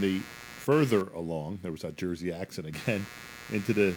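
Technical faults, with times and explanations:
Throughout, computer activity noise: a buzzy pulsing at around 100 a second, about 20 dB under the speech, tracking the machine's load through the shared audio ground rather than the talking.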